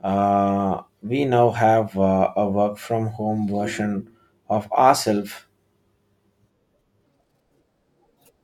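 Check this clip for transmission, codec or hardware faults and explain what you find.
There's one fault, right at the tail. From 7.06 s to the end, the section plays at the wrong speed, about 1.39 times too fast, likely from being fitted to the wrong clock. Speed and pitch rise together, so the speech turns hurried and lifts about five semitones, sounding chipmunky.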